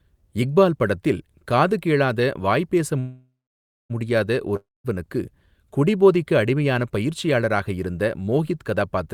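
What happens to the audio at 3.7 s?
At 3.7 s the speech is stalled inside a call audio freeze running from 2.99 to 3.92 s, just after "காது கேளாத வாய் பேச". The last sound smears into a fading buzz or hiss, then drops to silence for about 0.58 s. The likely cause is delayed packets draining the jitter buffer, so the receiver stretched what it had. When audio resumes, nothing is lost. The speech simply picks up about 0.9 s late.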